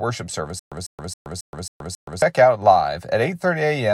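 From 0.59 to 2.22 s the speech breaks into a stutter with silent gaps. A 147 ms fragment repeats six times, each followed by 125 ms of dead silence, a 271 ms cycle. A stalled stream replaying its last buffer is the likely cause. The skipped audio is lost.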